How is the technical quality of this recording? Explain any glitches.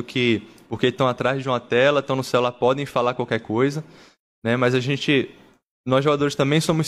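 Nothing stood out as a technical problem on listening to the recording.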